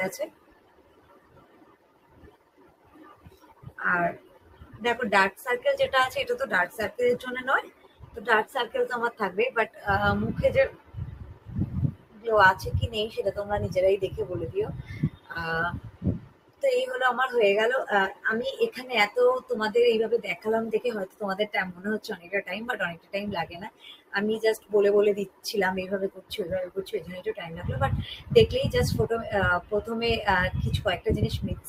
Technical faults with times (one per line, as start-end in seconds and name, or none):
0.00-31.68 noise suppressor applied to music or sounds
0.28-5.42 sound cut by the noise suppressor
6.69-13.20 sound cut by the noise suppressor
14.70-16.63 sound cut by the noise suppressor
18.14-28.28 sound cut by the noise suppressor